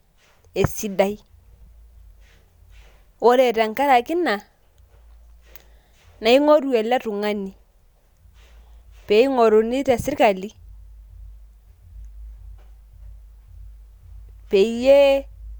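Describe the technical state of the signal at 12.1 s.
At 12.1 s the speech signal is intact, with no audible fault at that moment.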